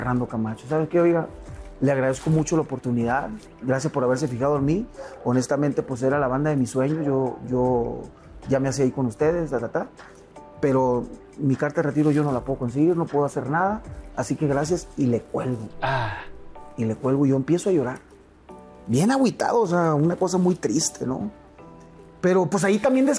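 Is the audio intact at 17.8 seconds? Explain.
Yes, at 17.8 seconds the audio plays through intact, with no dropout, click, distortion or other fault.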